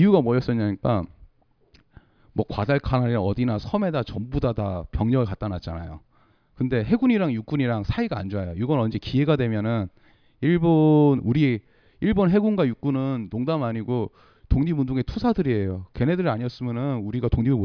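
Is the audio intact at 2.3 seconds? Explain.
Yes, the speech at 2.3 seconds plays through intact, with no dropout, click, distortion or other fault at that moment.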